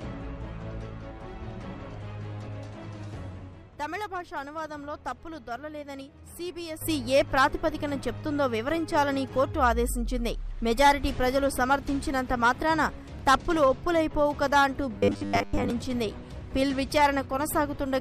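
At 2.47 s and again at 6.00 s the sound lurches forward with a brief smeared blip: compressed frames skipped, roughly three and then two 26.1 ms frames dropped by the decoder. At 6.81 s everything, background noise included, abruptly jumps about 12 dB louder and stays there to the end, a sudden gain jump likely from an unramped digital gain change. From 14.98 to 15.70 s the audio turns into a rigid metallic buzz at 100 Hz, robotic sound from repeated short buffers, likely a 10 ms buffer being replayed while most of the real audio is skipped.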